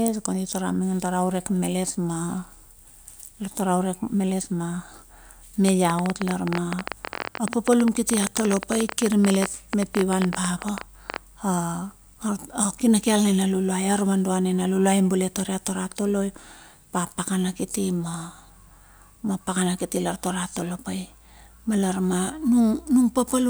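A train of clicks runs from 5.69 to 11.17 s in this speech recording: around 70 similar pulses at about 14.6 per second, unevenly spaced and standing roughly 15 dB above the speech, ticking through pauses too, likely from electrical interference or a faulty connection or power supply.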